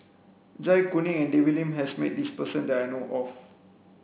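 Aliasing runs through the whole clip. The speech was resampled with no low-pass filter first. Energy above 4 kHz folds back below it, at roughly 25 dB under the speech. That fits a drop from 16 kHz to 8 kHz. Sibilants sound gritty and metallic.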